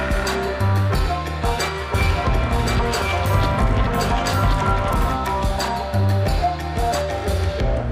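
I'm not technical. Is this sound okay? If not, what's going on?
No. From 1.94 to 5.16 s there is a doubled audio track: a second, quieter copy of the same sound trails about a second behind. Unlike a room echo, it doesn't fade or repeat, and it switches on and off abruptly, likely from an editing overlap.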